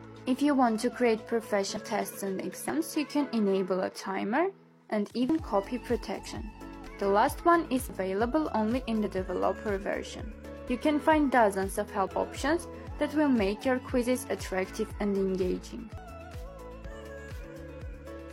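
Sudden jumps ahead turn up at 1.77, 2.69, 5.29, 6.87, 7.90, 10.68, 12.07 and 15.98 s. Each is likely a dropped buffer (overrun), where chunks went missing before being read. Most lose about a tenth of a second, roughly a fifth at 1.77 s and nearly a third at 12.07 s. Short glitches at 6.23–6.28, 9.01–9.07 and 16.81–16.87 s come from damaged data in a compressed stream, where the decoder loses sync and searches for the next frame header.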